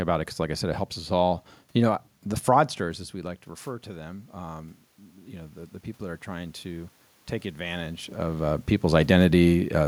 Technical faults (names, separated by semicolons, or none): automatic gain rising